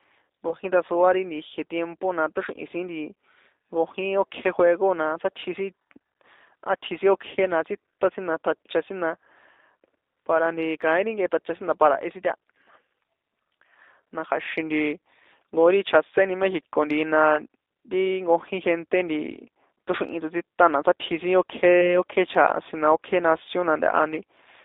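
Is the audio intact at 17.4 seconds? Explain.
No, not quite. Right after "chjaséni méxico ntihi na", from about 17.36 to 17.40 s, there's VoIP packet loss concealed by the speech codec. A gap of roughly 10 ms went missing, which fits a single lost frame, and the decoder filled it by carrying its last pitch and filter forward at dropping gain. You hear a short smeared patch, and the sound stays weak or distorted for a moment after the stream resumes, because each decoded frame leans on the one before.

That moment also carries the G.729 codec damage that runs through the whole clip. At 8 kbit/s, G.729A rebuilds the speech from a vocal tract filter, a pitch predictor and a few pulses per subframe, and the line is squeezed to roughly 300 Hz to 3.7 kHz. The result is plainly audible here: a narrow, slightly rough, synthetic quality with no top end, and the concealed patch sits on top of that.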